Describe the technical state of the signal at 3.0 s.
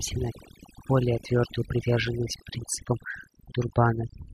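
At 3.0 s, as throughout the clip, overdone noise removal leaves the speech over near-silent, twinkling gaps. Individual frequency bands switch on and off rather than the whole signal gating.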